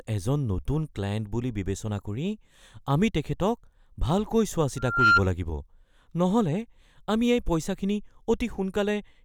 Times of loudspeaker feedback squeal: 4.76-5.22

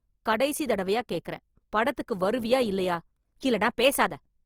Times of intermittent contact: none

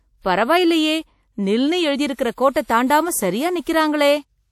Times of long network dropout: none

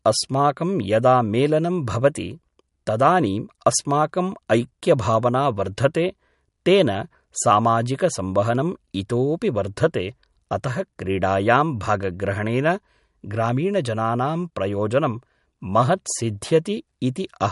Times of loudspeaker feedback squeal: none

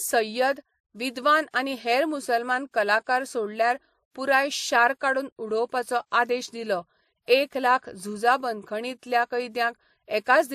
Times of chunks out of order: none

